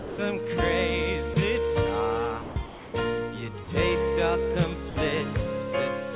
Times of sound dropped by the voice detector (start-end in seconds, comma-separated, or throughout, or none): 0.00-0.18, 1.34-1.36, 2.42-2.94, 3.64-3.68, 4.90-4.96